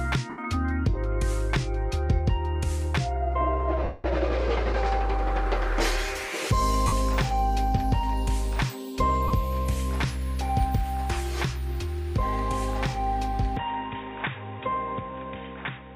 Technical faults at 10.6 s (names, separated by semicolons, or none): none